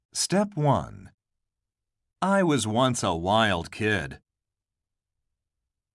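No technical faults are audible.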